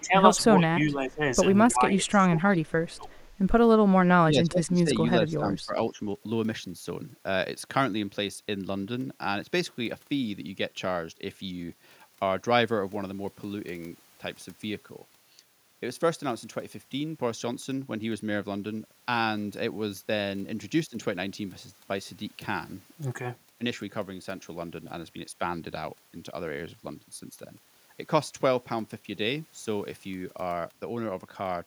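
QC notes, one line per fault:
0.00–0.15, 0.59–1.21, 1.72–3.10 and 4.23–5.99 s, speech suppressed in double talk: the voice dips in chunks, by roughly 10 dB at the start, then about 15 dB, then around 20 dB in the last two stretches, where about a second of each stretch is affected. This is likely the echo canceller hearing both sides at once, failing to separate the talker from the loudspeaker echo, and turning everything down.
1.70–1.74 and 2.68–3.24 s, echo leak: a faint delayed copy of the voice trails about 316 ms behind. The first is a tiny scrap roughly 30 dB under the speech, and the second is a longer, even quieter tail about 40 dB down. It's likely one side's echo canceller letting some loudspeaker pickup through its microphone, so that residue gets sent back.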